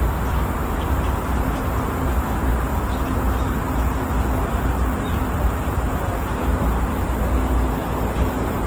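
Opus compression runs throughout: textures and tones come across noisy, rough and grainy, with audible damage. This is likely the music mode of the codec at a low rate, around 16 kbps, where thin bands are refilled with folded or noise content while the bandwidth stays full up to about 20.4 kHz.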